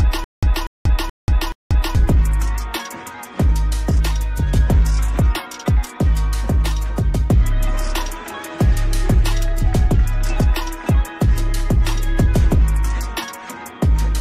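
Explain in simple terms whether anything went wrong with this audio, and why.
The player or stream likely stalled right from the start, replaying its last scrap of sound on each retry. This causes a stutter with silent gaps until 1.95 s: a 240 ms burst repeats four times, every 0.43 s, with dead silence between, and the missing audio is lost.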